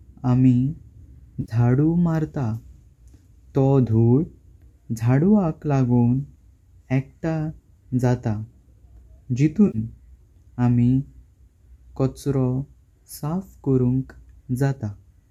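Around 1.41 to 1.52 s, and again at 9.67 to 9.78 s, there's AAC frame loss with concealment. Roughly 70 ms drops out each time. The decoder likely papers over it by reusing the last good spectrum, so you hear a brief smeared, noisy patch in the speech.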